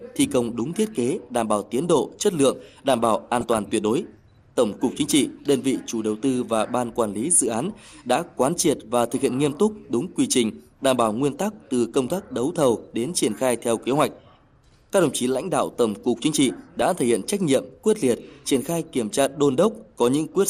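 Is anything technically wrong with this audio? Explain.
Yes. Throughout, the sound is dull and gurgling, with a granular edge and upper frequencies that come and go. The likely cause is MP2 compression at a low rate, consistent with roughly 80 kbps, where starved sub-bands are shut off and the rest coarsely quantised.

DAB burbling appears from 3.41 to 3.58 s and again from 16.59 to 16.82 s: brief bursts of noise blips in single sub-bands. Bit errors, pointing to a fraction of a percent, corrupt samples and scale factors, so individual sub-bands jump in level.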